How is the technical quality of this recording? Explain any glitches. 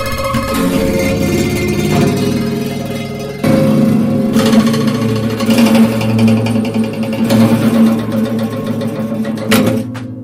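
Nothing in the recording stood out as a technical problem on listening.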